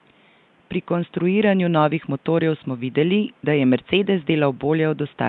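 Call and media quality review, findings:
Speech path likely encoded with Nellymoser compression, throughout. Fixed two bits a sample on 256-sample blocks, which fits a stream near 44 kbps; weak bands starved of bits and refilled with noise. Audible result: rough hissy halo around speech, smeared underwater character, codec damage plain. Room noise about 38 dB below speech, faint underneath.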